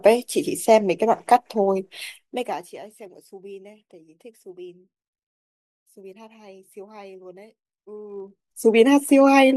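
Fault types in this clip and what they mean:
Zipper noise: the gain was changed in unsmoothed 1 dB jumps, about fifty a second, and each jump clicks. A fast ticking rides on the speech as it falls roughly 25 dB at 2.06–2.82 s and rises back at 8.08–8.64 s.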